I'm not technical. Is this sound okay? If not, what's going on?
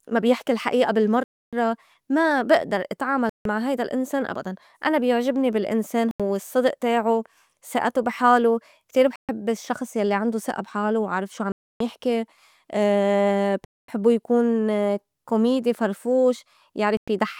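No. The speech keeps stopping dead for a moment, seven times: at 1.24 s (right after "ما بيحكي الحقيقة"), 3.29, 6.11, 9.16, 11.52, 13.65 and 16.97 s, each gap lasting about 0.09 to 0.29 s. This is likely a Bluetooth stall. The wireless link briefly falls behind, and speech picks up again after each gap.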